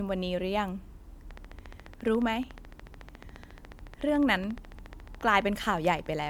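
From the start, the speech has a swirly, hollow, smeared quality with softened consonant attacks, more than a single 128 kbit/s MP3 would leave. That points to generation loss, likely from being re-encoded around four times, each pass piling fresh quantisation noise onto the last. Content still reaches 20.1 kHz.

At 1.31 s a train of clicks begins and runs to 6.28 s: evenly spaced ticks at about 14.1 per second, roughly seventy of them, peaking a few dB above the speech and audible in the gaps too. Steady interference from nearby equipment is the likely source.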